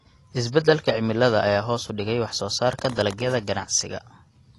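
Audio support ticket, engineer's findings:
Dull, smeared speech with fizzy, warbling sibilants, throughout. Nothing above 11.5 kHz. Likely AAC compression, AAC-LC, consistent with a low bitrate around 32 kbps: coarse quantisation per frame drops and smears high bands. Differs from a simple low-pass filter because the texture also warbles and fizzes below the cut-off. Differs from noise reduction because the damage sits on sibilants and sustained sounds, not in pauses.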